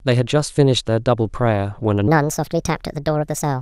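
Speech, with a section at the wrong speed from 2.08 s to the end at 3.61 s. It runs 1.36 times too fast, about five semitones higher, likely from a wrong playback clock.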